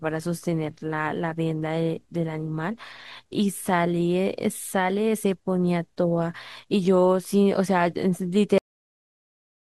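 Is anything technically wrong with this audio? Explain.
Yes, there's a cut-off end. At 8.58 s the speech stops mid-sound and drops straight to digital silence until the end, with no natural decay. The last stretch of buffers never got written or played out, so the recording just ends abruptly.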